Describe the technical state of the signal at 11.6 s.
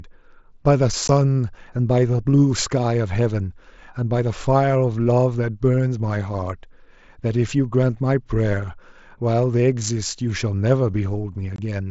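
Unconcealed Bluetooth headset packet loss, 11.56 to 11.59 s: about 22 ms of audio over the mSBC link vanished and was replaced by silence or an idle pattern, leaving an abrupt gap.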